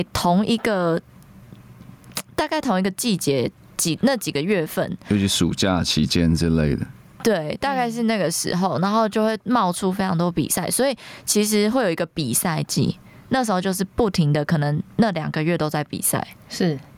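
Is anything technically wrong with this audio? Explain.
Yes, there's gain pumping throughout, with the gain swinging around 15 dB. That's likely an input gain set way too hot with a fast limiter or compressor clamping it, so everything sounds squashed and breathing.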